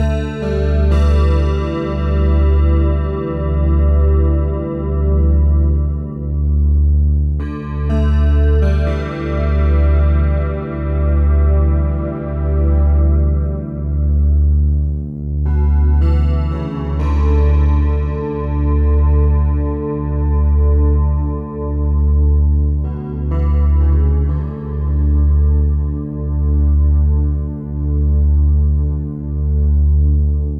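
No technical faults are audible anywhere in the recording.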